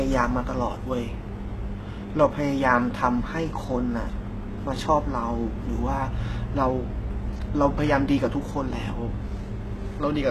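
From start to end, the speech carries heavy damage that is likely HE-AAC compression at a rate fitting about 16 kbps. Its treble is rebuilt from copied lower bands, so s sounds turn gritty and metallic. A spectrogram shows repeated, blocky upper bands and nothing above 12.3 kHz.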